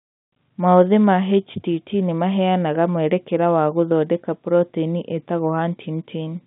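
Speech with no technical fault anywhere in it. The sound carries the narrow band of a G.711 telephone line, roughly 150 Hz to 3.7 kHz, with nothing above that.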